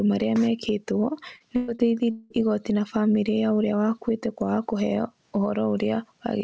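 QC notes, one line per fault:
Throughout: gain pumping. The level is pulled down on every loud sound, swinging by about 10 dB, so loud and soft parts sit squashed together. The likely cause is input gain set far too high, with a fast limiter clamping every peak.
1.36–2.33 s: repeated packet loss (robotic sound). Just before "igooti na famĩlĩ ya" the speech turns choppy, with pieces missing. Four gaps, the longest 193 ms, were patched by stretching the last sound, and that concealment covers about 39% of the stretch.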